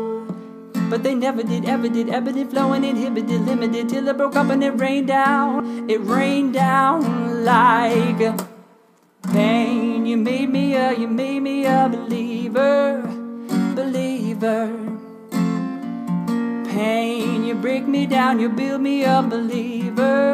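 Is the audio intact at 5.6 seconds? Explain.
No. From 5.57 to 5.60 s there is damaged data in the compressed stream: a short run of the encoded bytes is corrupt, so the decoder cannot read those frames correctly, loses its place in the stream and has to hunt for the next valid frame header before decoding resumes. For those roughly 30 ms the sound is replaced by a brief chirp, squawk, click or short hole.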